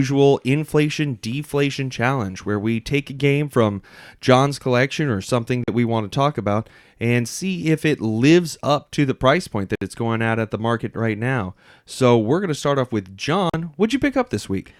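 At 5.64 s, after "collection or something", the speech cuts to silence for about 40 ms. It resumes at "we want to talk", skipped forward as if it had kept playing. At 9.75 s, after "to the price point", a longer gap of about 61 ms opens. At 13.50 s, after "to start off with", another 40 ms hole follows. This is likely a Bluetooth dropout. Late packets were discarded, and the output went silent.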